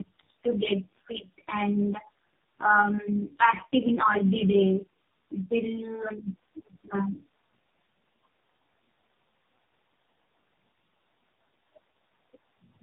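Rough, muffled, warbly speech throughout, with nothing above 3.6 kHz: tandem speech coding, the call decoded and re-encoded in turn by G.729A, GSM full rate and AMR-NB.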